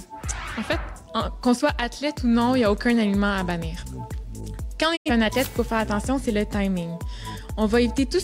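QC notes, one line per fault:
4.95 to 5.1 s, digital broadcast dropout: the sound fades to silence over 20 ms and stays muted until valid frames return. About 85 ms of programme never reappears, which fits two corrupted frames being discarded by the receiver rather than concealed.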